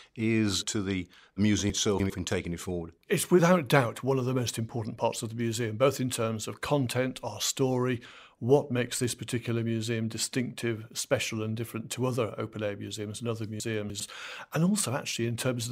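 From 1.7 to 2.1 s, just before "in taking it forward", and again from 13.6 to 14.0 s, after "air museums and other", chunks out of order: a 100 ms chunk plays three chunks late, jumbling the sound. Unlike a dropout, nothing goes missing; the audio is only reordered, with three hard joins.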